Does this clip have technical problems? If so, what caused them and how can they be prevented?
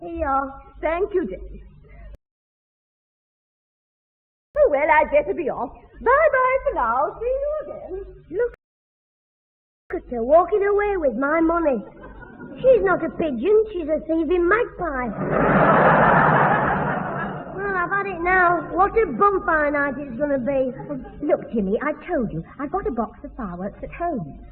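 Yes. The player twice drained its buffer of downloaded audio faster than new data arrived and had to halt playback, a rebuffering stall. The sound drops to silence from 2.15 to 4.55 s, adding 2.4 s, and again from 8.54 to 9.90 s, adding 1.36 s. Each time it picks up exactly where it stopped, so nothing is skipped, only delayed. Holding a larger buffer ahead of playback, and switching to a lower bitrate when throughput falls, would prevent these stalls.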